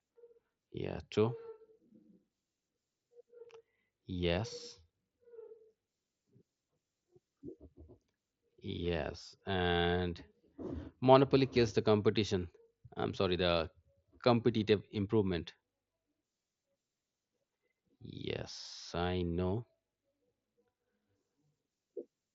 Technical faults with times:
none

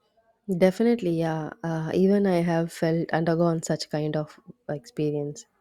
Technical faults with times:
none

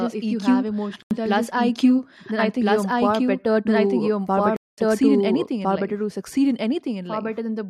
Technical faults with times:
0.00-7.69 doubled audio track
1.02-1.11 block of digital silence
4.56-4.78 block of digital silence

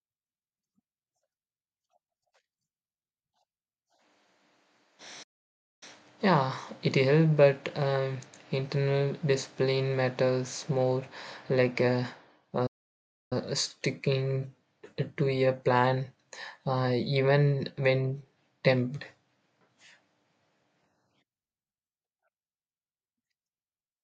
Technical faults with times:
5.23-5.83 playback stall
12.66-13.33 playback stall

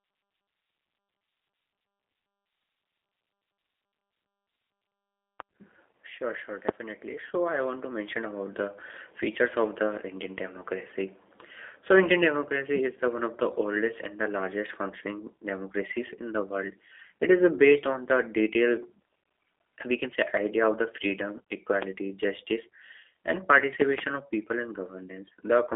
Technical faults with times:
0.00-25.75 G.729 codec

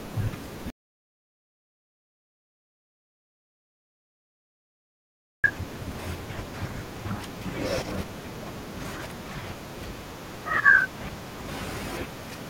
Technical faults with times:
0.70-5.44 audio dropout to silence

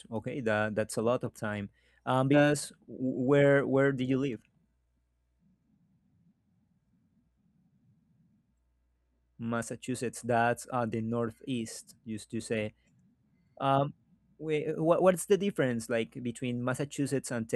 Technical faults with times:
2.33-2.44 skip ahead
2.90-3.28 jitter buffer speed-up
4.29-4.87 jitter buffer speed-up

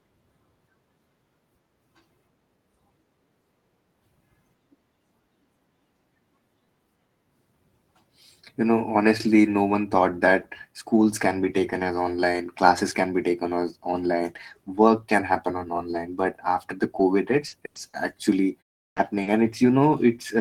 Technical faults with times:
17.47-19.28 repeated packet loss (robotic sound)
18.91-18.97 clipped start after a pause

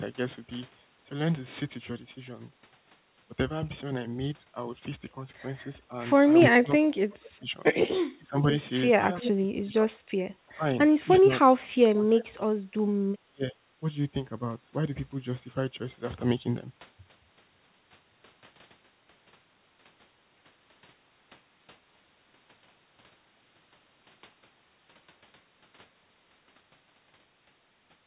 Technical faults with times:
6.55-7.54 speech suppressed in double talk
8.16-8.46 speech suppressed in double talk
8.94-9.92 speech suppressed in double talk
9.20-9.30 echo leak
10.49-10.65 speech suppressed in double talk
11.07-12.52 speech suppressed in double talk
13.22-13.59 speech suppressed in double talk

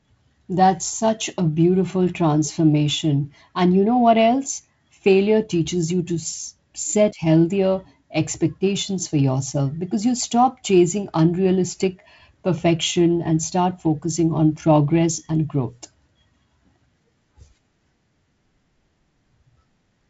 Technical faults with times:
none

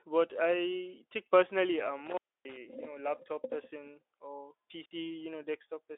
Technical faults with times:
2.06-2.57 intermittent contact
4.84-4.93 intermittent contact

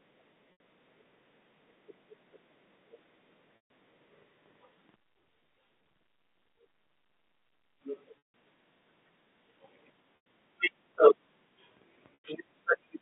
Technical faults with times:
0.52-0.60 packet loss with pitch repetition
3.56-3.69 packet loss with pitch repetition
4.96-7.81 one channel inverted
8.18-8.26 packet loss with pitch repetition
10.16-10.19 packet loss with pitch repetition
12.14-12.24 packet loss with pitch repetition

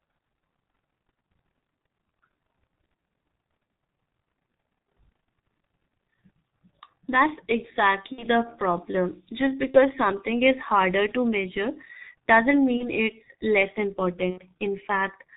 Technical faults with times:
0.00-15.36 G.723.1 codec
8.12-8.26 VoIP packet loss concealed by the speech codec
9.71-9.79 VoIP packet loss concealed by the speech codec
12.77-12.89 VoIP packet loss concealed by the speech codec
14.30-14.41 VoIP packet loss concealed by the speech codec

